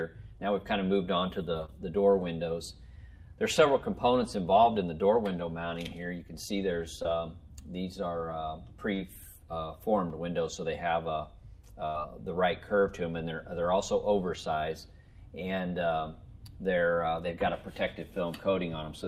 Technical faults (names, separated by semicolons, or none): short concealed packet loss; burst of packet loss